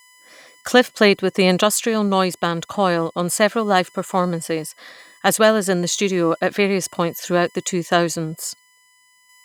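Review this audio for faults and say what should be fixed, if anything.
USB whine runs throughout the speech as a fixed-pitch tone at 1 kHz, strongest at its 2 kHz harmonic and roughly 35 dB below the speech. The bus draws current in 1 ms frames, and that pulsing leaks into the audio path through shared power or ground. To prevent it, power the interface separately or add a USB isolator to break the shared ground.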